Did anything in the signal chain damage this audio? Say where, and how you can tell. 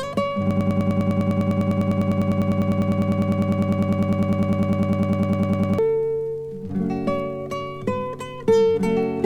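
Yes. From 0.51 to 5.79 s a broken-record loop repeats one 100 ms fragment back to back, likely a stalled playback buffer or stream. The waveform shows identical blocks, the spectrogram vertical stripes every 0.1 s, and the intended audio is gone.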